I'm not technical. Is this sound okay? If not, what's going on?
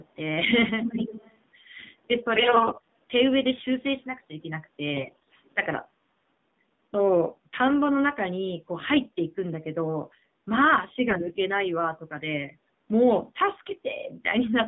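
No. The whole recording sounds thin, muffled and noticeably buzzy, like an old mobile phone call. That's the AMR narrowband mobile codec, a phone-call format that squeezes speech into very little data and drops everything above about 3.7 kHz, so the sound loses its crispness.

At 2.36 to 2.86 s, 4.94 to 5.35 s and 11.08 to 11.34 s the speech turns hoarse, scratchy and gargly while staying at roughly the same pitch and loudness. These are AMR bit errors: a weak connection corrupted part of the data, so the phone rebuilt those moments of speech wrongly. The first patch is the roughest.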